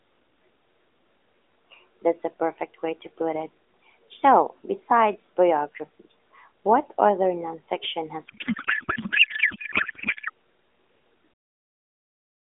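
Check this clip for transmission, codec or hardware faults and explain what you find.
One fault stands out: a codec payload misread. It runs from 8.28 to 10.30 s, starting right after "what other nonfiction has". The line is AMR narrowband, band-limited to roughly 300 Hz to 3.6 kHz, and it sounds like a high-rate mode with only light coding damage. In this window the frames were packed octet-aligned but unpacked as bandwidth-efficient. The decoder therefore pulled its parameters from the wrong bit positions. The speech is replaced by garbled noise and warble that barely tracks it. Clean audio returns at 10.30 s, once both sides read the format the same way.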